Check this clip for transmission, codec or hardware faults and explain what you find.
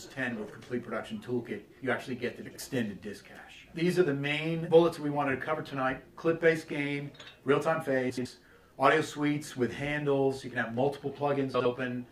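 One fault occurs three times: frames out of order, at 2.45 to 2.57 s, 8.10 to 8.26 s and 11.54 to 11.66 s. Two neighbouring runs of frames arrived swapped and were decoded that way. Each stretch plays with its halves exchanged, in 52.2 ms blocks at the first and last and 78.4 ms blocks at the middle. This makes a brief garbled flutter, with no time lost.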